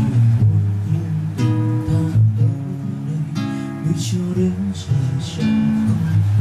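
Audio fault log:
4.47–5.71 s, channel delay (comb filtering): one channel lags by about a sample, so the mono sum cancels near 20 kHz, softening the top end.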